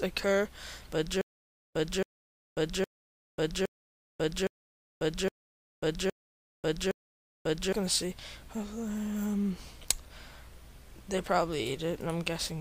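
From 1.21 to 7.73 s there is a stutter with silent gaps. A 273 ms burst of sound repeats eight times, each followed by 541 ms of digital silence, an even 814 ms cycle. A stalled stream likely replayed its last fragment each retry. The intervening audio is lost.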